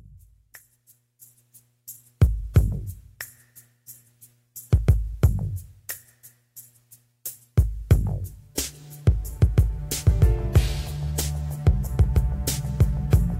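No technical faults can be heard anywhere in the audio.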